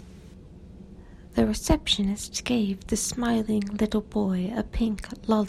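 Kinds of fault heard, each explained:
Nothing in this speech recording stands out as a technical fault; it just sounds like ordinary, untroubled audio.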